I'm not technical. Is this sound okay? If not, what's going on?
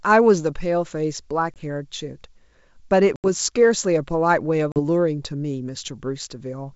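No. The audio has packet loss on an ADPCM call. Three times, at 1.54 to 1.60 s, 3.16 to 3.27 s and 4.72 to 4.79 s, a short piece of the call goes missing: about 20, 80 and 40 ms. Each gap fits one, four and two lost packets. It drops to sudden dead silence rather than being smoothed over, and the speech then comes back with a click, a jump in level or brief roughness as the decoder catches up.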